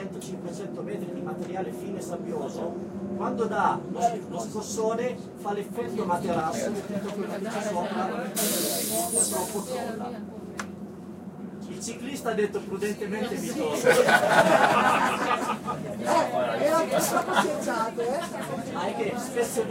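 Sudden gain jump, 5.85 to 6.41 s: the sound and background noise step up together by about 4 dB, likely from a gain change applied without a ramp.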